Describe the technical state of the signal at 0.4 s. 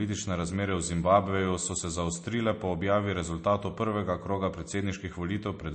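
At 0.4 s the speech is carrying MP3 compression damage that runs through the whole clip, likely from a low-bitrate encode consistent with about 34 kbps. Starved of bits, the encoder removes everything above 8.3 kHz and drops weak frequency lines frame by frame, leaving dull, watery, swirling speech.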